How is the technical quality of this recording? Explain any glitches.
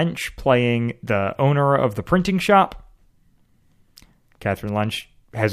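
No technical faults can be heard in the recording: the speech signal stays continuous and stable throughout, so there are no glitches to explain.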